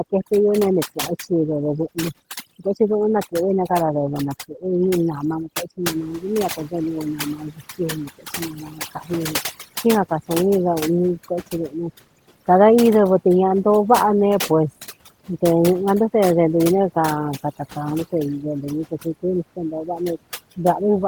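Overdone noise removal runs through the whole speech clip. Frequency bands near the noise floor are pushed almost to silence, so the background twinkles.

At about 6 s the room noise jumps by about 15 dB, settling about 25 dB below the speech. From 5.88 to 7.61 s the noise suppressor is catching up. Its noise estimate lags, so the louder noise passes through first, then sinks by about 9 dB over 1.73 s.

Speech is cut by the noise suppressor twice. From 7.37 to 7.60 s it drops by up to about 12 dB for roughly a tenth of a second. From 8.54 to 8.80 s it drops by up to about 8 dB for roughly a fifth of a second. Both times the suppressor mistakes part of the speech for noise, and those parts sound swallowed and faint.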